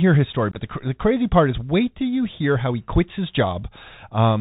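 A speech clip carried over a Bluetooth CVSD headset codec, whose one-bit delta coding fits a 64 kbps link. It cuts everything above 4 kHz, adds granular hiss and makes s sounds scratchy. Unconcealed Bluetooth headset packet loss between 0.51 and 0.58 s drops about 41 ms of audio across roughly 53 ms, with the longest gap near 19 ms. The result is a rough, chopped, crackly patch with abrupt edges.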